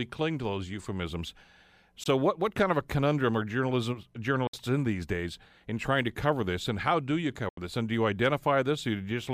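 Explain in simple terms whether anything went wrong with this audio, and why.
A Bluetooth dropout is likely behind three short silences in this speech: at 2.04 to 2.06 s (about 20 ms), at 4.47 to 4.54 s (61 ms), and at 7.49 to 7.58 s (81 ms). Chunks of audio arrived at the headphones too late and were thrown away, so the sound cut out abruptly. When it returns, it has moved on as though it kept playing, so that part of the speech is simply missing.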